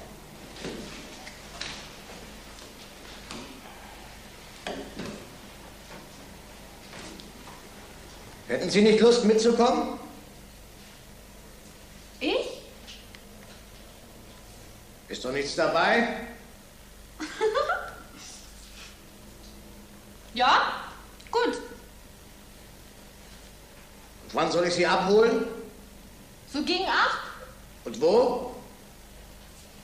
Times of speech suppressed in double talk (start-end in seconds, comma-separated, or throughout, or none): none